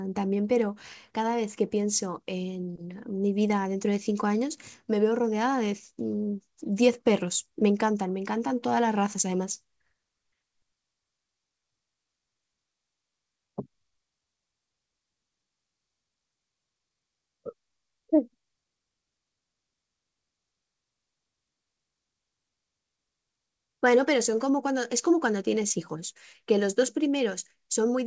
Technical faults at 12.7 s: none

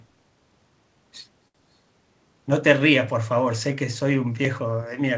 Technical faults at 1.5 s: short stall from a late packet

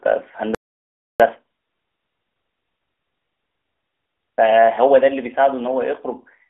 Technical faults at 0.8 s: playback stall

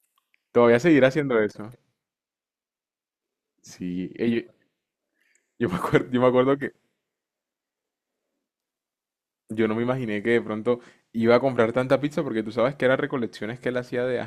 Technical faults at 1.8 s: channel delay (comb filtering)

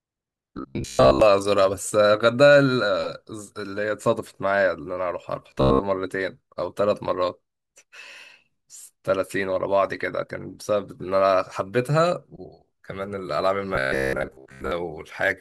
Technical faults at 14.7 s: robotic sound from repeated short buffers

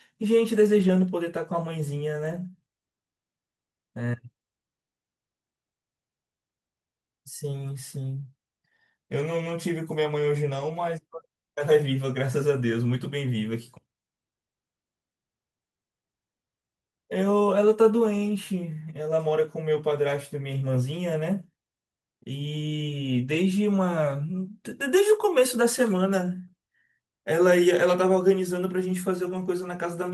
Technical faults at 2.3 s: lost packet rebuilt from error correction

